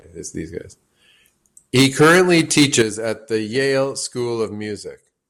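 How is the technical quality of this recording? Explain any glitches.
The recording has clear technical faults, all within the second half of its first three seconds.

From 1.75 to 2.82 s there is microphone overload. The loudest peaks sound flattened and crackly, as if driven about 10 dB past full scale. The likely cause is input gain set too high, so the converter cuts off peak tops across a small share of the waveform.

At 1.82 s the microphone volume steps down by about 3 dB. The level drops abruptly. This is likely the call software reducing input gain in response to the distortion.

At 2.82 s it steps down again, by about 10 dB. Sound and background fall sharply in level, and the harsh clipping ends there.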